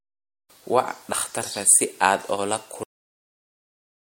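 A speech clip with two faults. At 1.12 s, compressed frames are skipped, dropping roughly 50 ms, about two frames of a 24 ms codec. At 2.83 s the audio is cut off at the end, stopping mid-sound into flat digital silence with no decay. That abrupt stop is what separates it from a natural ending or a fade-out: the final buffers were never written.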